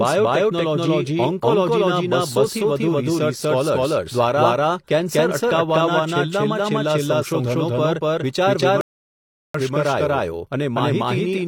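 Speech, heard twice throughout as a doubled audio track: a second full-band copy at roughly the same level trails the original by around a fifth of a second. Unlike a room echo or reverb, it has no decay or tonal colouring, so it sounds like a clean duplicate, likely from a second, slower capture path being mixed in. A rebuffering stall from 8.81 to 9.55 s cuts the sound to silence for 0.73 s. Unlike a dropout, nothing is missing: the audio resumes exactly where it stopped, so the gap only adds time.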